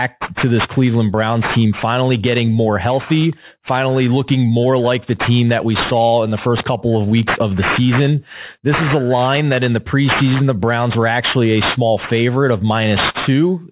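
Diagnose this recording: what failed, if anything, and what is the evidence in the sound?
The sample-rate conversion stage failed: there's aliasing across the whole clip. Sibilants come out gritty and metallic, with the spectrum running hard up to a 4 kHz edge. That points to a drop to 8 kHz with no anti-alias filter, so content above 4 kHz folds back in, only about 10 dB under the speech.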